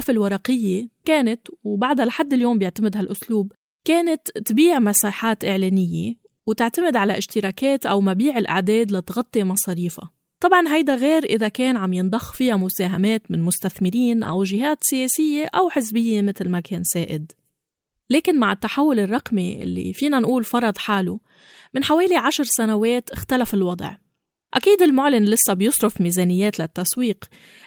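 Lost packets rebuilt from error correction occur at 12.47–12.49 s (20 ms), 14.23–14.33 s (60 ms, which fits three lost packets) and 19.61–19.67 s (40 ms). The decoder fills each gap from a low-bitrate copy in the following packet, so there is no silence, but the speech briefly turns rougher and noisier.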